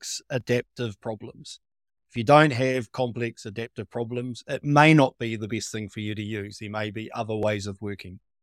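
From 0.41 to 7.43 s the speech picks up a regular click every 1.75 s, about five in all. The likely cause is clock drift buffer slips, with two mismatched clocks dropping or repeating a small block each time.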